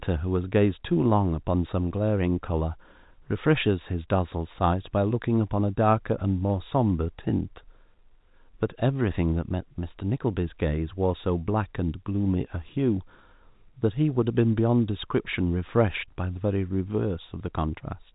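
No faults turn up anywhere in this speech, just the usual narrow telephone sound of G.711 coding with nothing above about 3.8 kHz.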